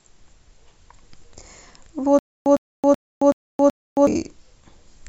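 From 2.19 to 4.07 s, stutter with silent gaps: the same 107 ms burst returns five times, spaced by 271 ms of digital silence, likely a stalled stream retrying, not plain dropouts.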